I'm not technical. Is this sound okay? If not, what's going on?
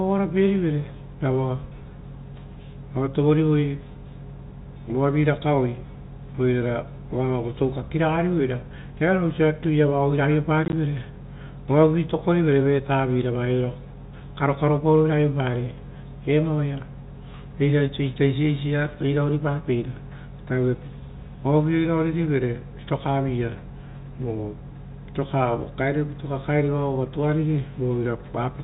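No. Between 10.65 and 10.73 s the speech breaks up into tiny gaps of silence, each no longer than 20 ms and together about 40 ms. That's packet loss filled with silence: pieces of the transmission went missing and blank spaces replaced them. The pattern suggests several small packets were dropped. The narrow, telephone-like tone comes from G.711 telephone coding, which is working as intended.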